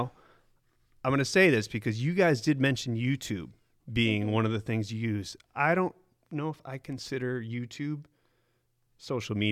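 A speech recording, with nothing technically wrong with it.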